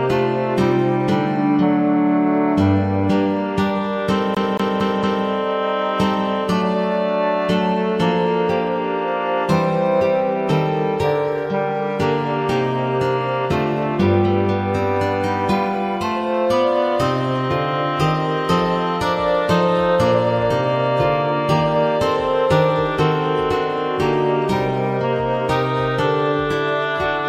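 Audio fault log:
4.35 to 5.26 s, CD stuck on one turn: the same 228 ms slice of audio repeats four times, each pass cut by a brief mute as the laser jumps back one track at a scratch, producing the rapid, evenly spaced stutter of a skipping disc.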